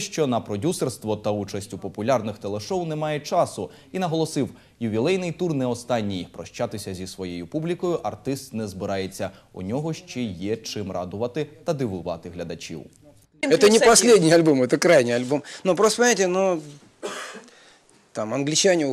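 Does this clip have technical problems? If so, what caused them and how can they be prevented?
No, nothing here sounds broken or glitchy, so there's no problem to trace back or guard against.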